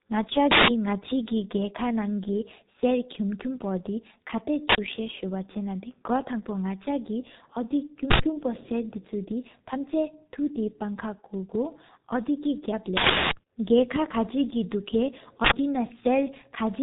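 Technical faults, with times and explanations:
Throughout, G.723.1 codec: heavy low-bitrate coding at 6.3 kbit/s strips everything above 3.8 kHz and models the speech coarsely, leaving it muffled, hoarse, with smeared consonants.
0.51 s (0.17 s), 4.69 s (0.09 s), 8.11 s (0.09 s), 12.97 s (0.34 s), 15.45 s (0.09 s), uninitialised buffer: blocks played before being filled output stale memory as loud digital noise bursts, fitting buffers of 4096 to 16384 samples.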